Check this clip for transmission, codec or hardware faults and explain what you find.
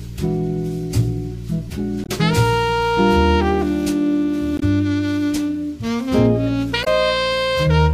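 Three brief glitches break into the audio at 2.03 to 2.09 s, 4.56 to 4.63 s and 6.81 to 6.87 s. Each is damaged data in a compressed stream: corrupted bytes make the decoder misread frames and lose sync until it finds the next valid header.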